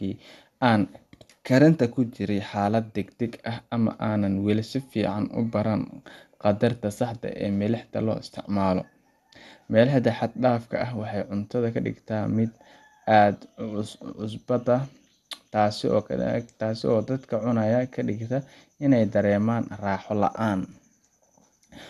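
Throughout, likely MP2 compression starves the upper sub-bands of bits: nothing sounds above 12.2 kHz, and the speech turns dull, with a gurgling, granular edge.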